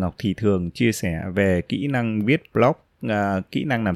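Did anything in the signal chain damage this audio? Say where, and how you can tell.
No, nothing in this speech recording stood out as damaged on listening, so there is no stage in the chain to point to.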